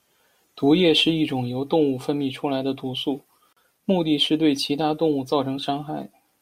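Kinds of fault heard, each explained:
Gap at a join of encoded pieces: the speech drops out for about 39 ms between 3.53 and 3.57 s, just after "来的毒素", then carries on from exactly where it stopped. The pieces either side were encoded separately and butted together untrimmed, so the encoder's start-up delay and the padding of the final frame both remain as silence. The edges of the hole are smeared by the codec, so the fully silent part is shorter than the gap, and the joins fall on a 4-second spacing.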